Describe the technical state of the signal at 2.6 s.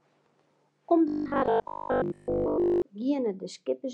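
At 2.6 s it's robotic sound from repeated short buffers, 1.08 to 2.82 s: likely a 20 ms chunk looping throughout, forcing a rigid, metallic 50 Hz buzz.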